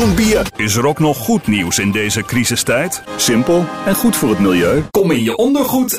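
At 2.91 s there's a repeated buffer: a tiny 1.33 ms chunk, which fits a 64-sample buffer, plays twice, giving a brief click rather than a stutter.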